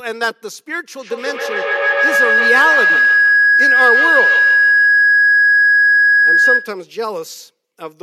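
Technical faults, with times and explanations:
0.97 to 6.85 s, feedback howl: A microphone-to-loudspeaker loop gains level each trip. A tone near 1.5 kHz builds, with repeats roughly every 150 ms. It peaks about 6 dB above the speech.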